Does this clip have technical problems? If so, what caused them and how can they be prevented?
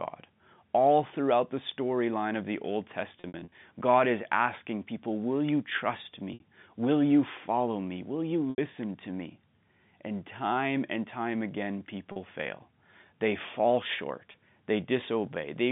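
Yes. Packet loss with pitch repetition occurs five times: a cluster from 3.20 to 3.52 s with about 180 ms missing in several gaps, the longest 60 ms; then 6.34–6.40 s, 8.50–8.58 s, 12.12–12.16 s and 14.32–14.34 s. Each gap is filled by repeating the last pitch period, which sounds like a briefly held, buzzy tone in the short gaps, while the longer ones fade into silence before the speech returns, and the gap lengths fit 20 ms packets on the G.711 telephone coding path. A larger jitter buffer, forward error correction or a more stable network link would prevent these dropouts.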